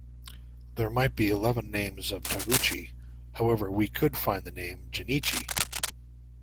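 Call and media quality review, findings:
Cable scratch noise, 2.24–2.74 s and 5.22–5.90 s: dense ragged bursts of scratchy rustle over the speech, roughly as loud as the speech itself. Likely a worn cable or connector being moved, so contact resistance jumps around fast. Worth reseating or swapping the lead. Opus hybrid at around 20 kbps underneath stays fullband with only light coding wear.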